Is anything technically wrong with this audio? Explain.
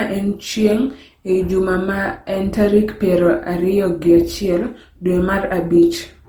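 Yes, there's generation loss running through the whole speech clip. It sounds swirly, hollow and smeared, with blurred attacks, likely from about seven rounds of lossy re-encoding, which fits Opus at around 48 kbit/s. Each pass re-quantises on a shifted frame grid, so the damage piles up.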